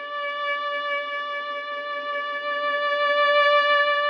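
No technical faults can be heard anywhere in this recording of sounds. There is nothing here to place on a timeline or describe.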